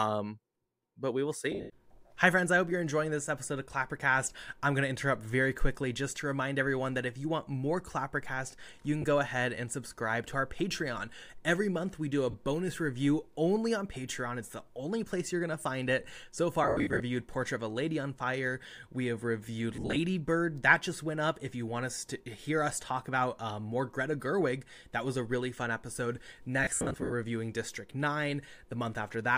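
The speech has six spots of lost LE Audio frames: 1.52 to 1.70 s, 9.02 to 9.04 s, 12.31 to 12.34 s, 16.64 to 17.00 s, 19.76 to 19.96 s and 26.64 to 27.12 s. The LC3 decoder covers each gap by replaying the last spectrum with scrambled phase, so the sound smears into noisy hash. The longer bursts are scattered dropouts of up to about a tenth of a second each, with the worst near 27 s.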